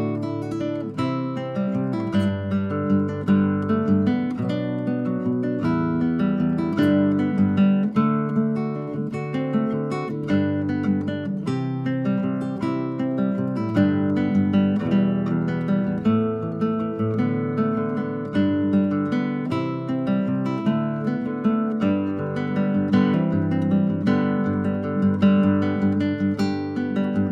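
Nothing in the recording stood out as a technical problem on listening.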